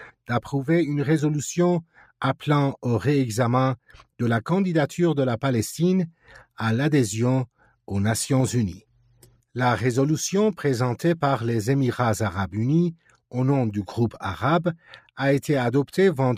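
Four times the noise suppressor clamps down on sound it has mistaken for noise: 1.83 to 2.11 s (dropping about 12 dB), 7.47 to 7.75 s (about 10 dB), 8.89 to 9.41 s (about 12 dB, the longest, around half a second) and 12.96 to 13.33 s (about 9 dB). Each time the level sags briefly, so the audio ducks before recovering.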